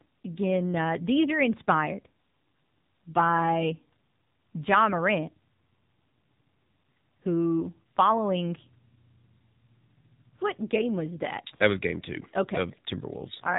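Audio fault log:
throughout: AMR narrowband mobile codec. Nothing above 4 kHz survives, so the spectrogram shows a hard ceiling there. The speech has a plainly buzzy, synthetic edge from a pulse-driven vocal-tract model rebuilt every 20 ms, which fits a low mode near 7.4 kbps.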